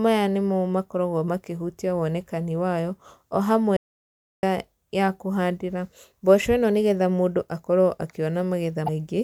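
From 3.77 to 4.43 s the speech cuts to an audio dropout to silence, about 0.66 s of silence with no room tone. That dead floor sets it apart from a level dip or a noise gate. The likely cause is a lost input while recording continued. At 8.85 to 8.89 s, damaged data in a compressed stream produces a brief glitch as the decoder misreads corrupted frames and resyncs.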